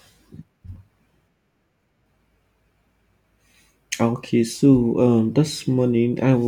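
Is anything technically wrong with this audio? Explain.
No, nothing technically wrong.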